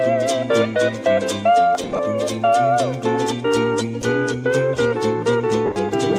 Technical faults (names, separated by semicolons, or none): lost LE Audio frames